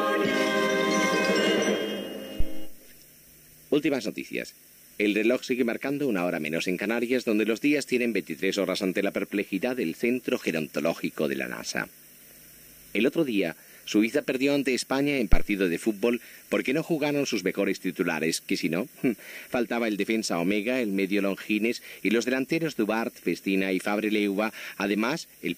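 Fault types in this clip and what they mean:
phantom power thump: Two deep thumps, one at 2.40 s peaking at about -12 dBFS and decaying over 102 ms, and a sharper one at 15.33 s at about -6 dBFS, gone in 34 ms. Switching a supply on a live input sends a voltage step through the coupling capacitors.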